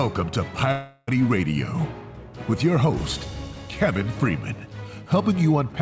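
From 0.72 to 1.09 s the sound breaks off and is replaced by a smeared, fading buzz that carries on the last moment for about 355 ms, then resumes with roughly 360 ms of material gone. This is likely a long network dropout, concealed by the call path's receiver, whose band stops at 8 kHz.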